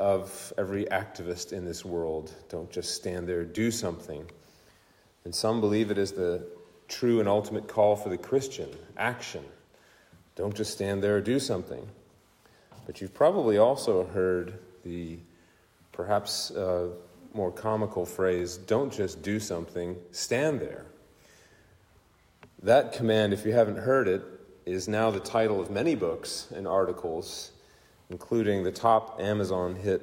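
No technical faults can be heard anywhere in the recording; the signal holds steady and intact throughout.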